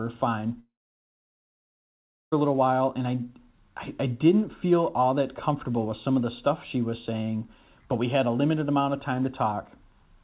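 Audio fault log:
0.6 to 2.34 s, long network dropout. About 1.7 s of speech is gone. The last sound trails off briefly, then about 1.6 s of silence. Speech returns at "a little while and". Likely cause: packets stopped arriving, and the receiver had nothing to play.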